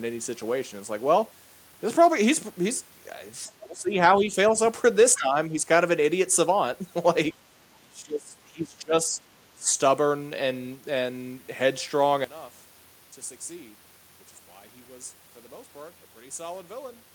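From 3.46 to 3.51 s, the other side's voice leaks through: the echo canceller likely failed to remove the far end playing from the loudspeaker. The result is a brief, very faint scrap of a second voice, roughly 35 dB below the talker.

Right after that, speech is suppressed in double talk. With both sides talking at once, the echo canceller likely could not separate the talker from the echo and turned everything down. The talker's voice dips at 3.48–3.96, 4.14–4.55, 5.17–5.54, 7.51–7.60, 7.77–9.26 and 9.55–9.69 s, mildly in places and by roughly 25 dB at worst across the long stretch near 8 s.

From 12.24 s to the end, one channel is inverted. A stereo channel likely has reversed polarity, so the centred speech cancels when the channels are summed to mono. The level falls by about 17 dB, leaving a faint residue of the voice.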